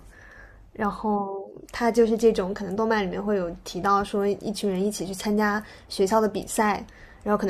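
Nothing technical stands out in this speech recording; there's simply no fault to point to anywhere along it.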